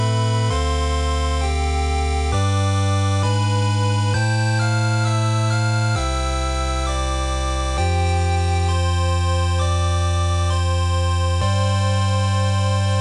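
No technical faults can be heard anywhere in the signal, and it stays steady and intact throughout.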